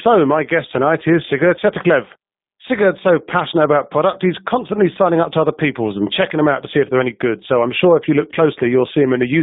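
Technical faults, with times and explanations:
Throughout, G.729 codec: the speech is confined to roughly 150 Hz to 3.7 kHz and has a rough, buzzy, synthetic edge. That edge, beyond the muffling of plain band-limiting, comes from rebuilding each 10 ms frame from a filter, pitch predictor and sparse pulses, which fits an 8 kbit/s G.729A stream.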